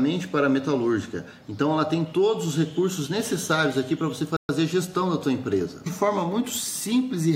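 A single dropout sits at 4.37 s: the audio cuts to dead silence for 125 ms, out to 4.49 s, then carries straight on. That clean gap with no fade or smear points to a Bluetooth stall. Likely what happened is interference delayed packets on the wireless link, so the headphones' buffer emptied and playback simply paused until the resent data came through, after which the sound resumed.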